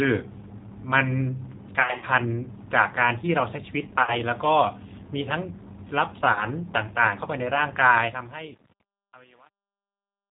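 Throughout, the G.729 codec leaves the speech band-limited and slightly rough and synthetic, consistent with an 8 kbit/s G.729 stream; a spectrogram shows nothing above 4 kHz.

VoIP packet loss concealed by the speech codec occurs at 1.82–2.05 s (about 120 ms lost, scattered), 4.03–4.17 s and 6.33–6.45 s. The decoder extrapolates stretched, smeared frames, and the spectrogram shows blurred, repeated harmonics.

From 7.81 s, truncation distortion on a fade roughens the smooth fade-out, and it is worst from 8.05 s. Too few bits, fitting roughly 9-bit truncation, leave the quiet end gritty, and the waveform shows coarse square steps.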